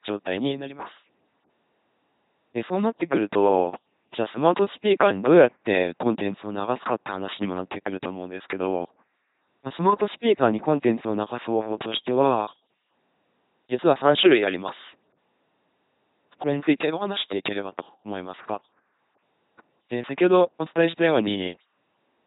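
The speech in this clip has been passed through an LPC-10 vocoder for its whole length, with heavy codec damage. Instead of carrying the waveform, the codec models the vocal tract with a short all-pole filter and excites it with either a buzz of pulses or plain noise, deciding one or the other for each moment. The result is a buzzing, mechanical robot voice, with wrong-way buzz or hiss where that decision slips. The sound fits a 2.4 kbit/s stream, and nothing survives above 3.9 kHz.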